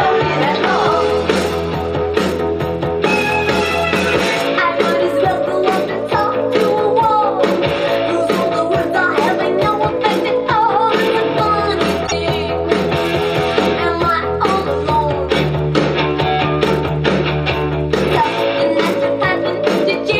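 A short stretch of audio plays twice at about 12.06 to 12.13 s, a repeated-frames fault: one compressed block of about 26.1 ms was decoded again, giving a brief stutter and adding 26.1 ms. The block length fits a single 1152-sample MP3 frame at 44.1 kHz.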